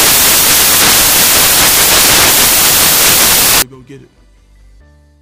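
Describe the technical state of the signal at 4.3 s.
At 4.3 s the signal is intact, with no audible dropout, distortion, clipping or other fault at that point.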